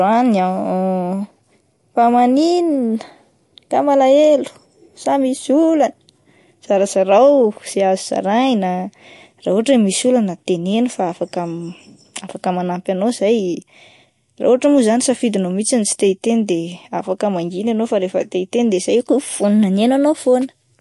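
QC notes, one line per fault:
Throughout, MP3 compression: watery, swirly speech with nothing above 11.3 kHz; likely a low-bitrate MP3 encode, around 50 kbps, dropping weak lines frame to frame.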